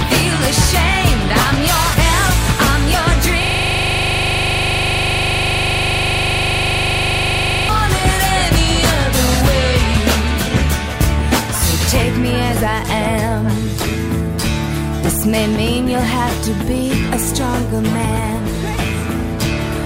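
From 3.43 s to 7.69 s the sound locks into a system hang loop: one 40 ms slice of audio repeats exactly, over a hundred times, producing a rigid buzz at 25 Hz. The computer or driver stalled while the audio hardware kept replaying the same ring buffer, which fits a buffer of about 40 ms. Unlike underrun dropouts, nothing goes silent, and unlike mains hum, the buzz carries the clip's own captured timbre, identical on every cycle.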